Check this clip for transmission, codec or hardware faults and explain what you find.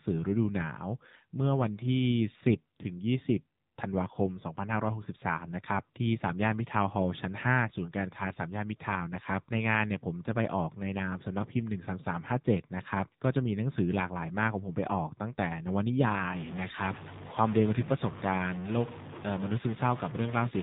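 Two faults are present: mobile-codec coding across the whole clip, and bit-level distortion over the final seconds.

The AMR narrowband mobile codec squeezes the speech through an 8 kHz-sampled vocal-tract model, which fits a low rate near 7.4 kbps. Nothing above 4 kHz survives, and the sparse excitation pulses leave the voice plainly buzzy and synthetic throughout.

From 16.35 s to the end, a noisy distortion rides on the speech, and hiss fills the gaps between sounds. The likely cause is a stuck bit: one data bit held fixed shifts about half the samples by a constant amount.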